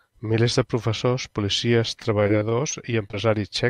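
Repeated packet loss from 2.03 to 3.15 s, after "de professors policies": brief gaps, each patched with stretched sound, leave the speech choppy and robotic.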